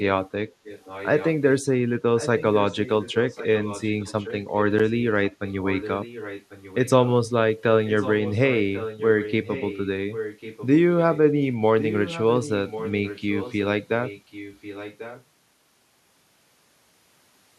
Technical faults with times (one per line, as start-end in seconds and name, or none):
0.64-1.54 echo leak
2.17-4.65 echo leak
5.29-7.07 echo leak
7.86-10.68 echo leak
11.80-13.61 echo leak
14.03-15.24 echo leak